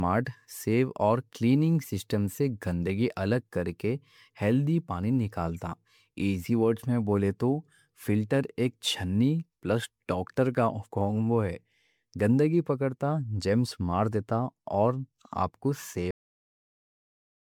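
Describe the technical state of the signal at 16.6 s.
At 16.6 s there's nothing but digital silence, because the clip has a cut-off end. The audio stops dead at 16.11 s, right after "دیتا اور آپ کو", and stays flat to the end at 17.50 s. The final buffers never got written or played, so the sound is chopped mid-syllable with no decay or tail, just an abrupt drop to silence instead of a natural trailing off.

Leading up to that cut, the speech has a swirly, smeared, hollow quality, with blurred consonant attacks. That points to generation loss. The likely cause is the audio being run through lossy MP3 coding around ten times, each pass re-quantising on a shifted frame grid, so the noise piles up. It sounds worse than a single encode at 128 kbit/s would, and nothing is left above 20 kHz.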